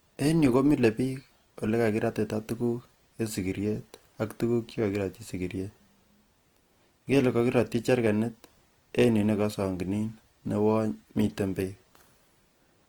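Throughout, the speech sounds plainly grainy and rough, likely from low-rate Opus compression; a spectrogram shows smeared, noise-filled bands still reaching about 20.2 kHz.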